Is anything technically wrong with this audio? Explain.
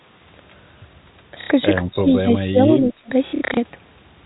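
Yes, there are two faults: two stretches of packet loss concealed by repetition, and a long dip that sounds like speech suppressed in double talk.

From 1.41 to 1.5 s there is packet loss with the last packet repeated. About 90 ms of audio goes missing, which fits three lost 30 ms packets, and the receiver fills the gap by replaying the last good packet. The repeats don't line up with the pitch period, and the run turns into a brief mechanical buzz near 33 Hz. It sounds like a short robotic stutter. The same fault returns between 3.27 and 3.57 s, but here it is scattered: about 210 ms is lost across that 300 ms span, which points to roughly seven packets, and the longest unbroken run is 60 ms. The result is a string of choppy, stuttering repeats rather than one stall.

Between 1.84 and 3.1 s the speech level sags and recovers in pieces. Roughly a second of that span is affected, and the level falls by up to about 20 dB at its deepest. 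The pattern is typical of speech suppressed in double talk. The likely cause is an echo canceller that cannot separate the near talker from the loudspeaker echo while both sides speak, so it turns the whole signal down. The speech sounds ducked and intermittently cut away. The G.711 mu-law telephone coding underneath keeps the audio band-limited to below 4 kHz.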